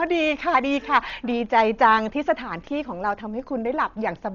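From start to finish the speech carries heavy Dolby Digital compression damage, likely from an AC-3 encode at a very low bitrate, with the sound pointing to something around 40 kbps. The encoder has cut the band so that nothing remains above 7 kHz, which makes the speech sound dull and muffled. Many frequency lines evidently received no mantissa bits and were refilled with dither noise on decoding. That gives a rough, fluttering grain around voiced tones.

From 0.13 s to 4.28 s, clock slip clicks run underneath: faint, evenly spaced ticks roughly every 70 ms, around seventy in total. These likely come from two devices running on unsynchronised clocks, with an error of a few hundred parts per million. Each time the drift builds up to a whole sample, a sample is dropped or repeated, and each tick is consistent with a single-sample slip. The ticks stand out most on sustained loud passages.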